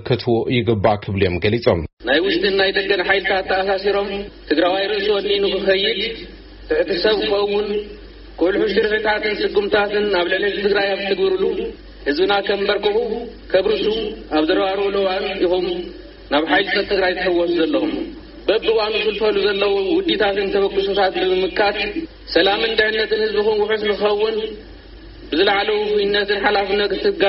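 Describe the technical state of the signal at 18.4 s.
At 18.4 s the signal is intact, with no audible technical fault at that moment.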